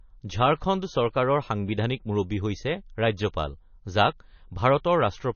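From start to finish the speech sounds dull and watery, with nothing above about 6.6 kHz, so s sounds lose their edge and gain a swirling, metallic chirp. The likely cause is heavy MP3 compression at a low bitrate, near 30 kbps. Short of bits, the encoder cuts the treble at a fixed point and drops weak frequency lines that flicker on and off between frames, which produces the swirl and smears consonant attacks.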